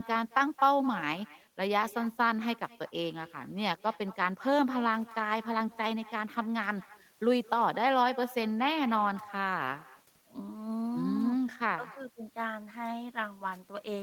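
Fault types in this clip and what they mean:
Echo with no canceller: The far end is playing the call through a loudspeaker. Its microphone picks that sound up again, and nothing there removes it, so the talker's own speech returns over the network. In this clip, every phrase is followed by a second copy about 20 dB quieter. The copy arrives roughly a fifth of a second late and sounds thin. It runs through the whole recording and trails each utterance like a faint shadow.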